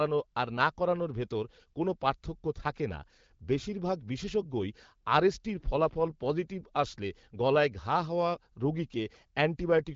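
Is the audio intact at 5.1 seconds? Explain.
Yes, the audio is intact at 5.1 seconds, with no fault at that moment, the speech carried through the AMR wideband (HD Voice) codec at 12.65 kbit/s.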